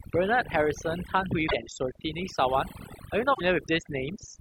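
Overdone noise removal runs through this speech recording from start to finish. A noise reducer set far too aggressively has pushed individual frequency bands down to near silence wherever they sat close to its noise estimate, taking the softer parts of the voice with them. The result is a background of near-silence flecked with twinkling specks. At 1.48 to 1.55 s and again at 3.33 to 3.41 s, the audio briefly garbles and lurches forward. Each disturbance lasts roughly three 26.1 ms frames, and the likely cause is a broken MP3 bit reservoir. Frames that borrow data from earlier ones lost their source when frames were cut, so the frames following each cut decoded from the wrong bytes and came out as corrupted sound before playback settled again.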